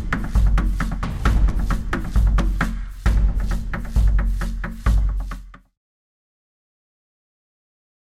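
No technical faults can be heard in this music.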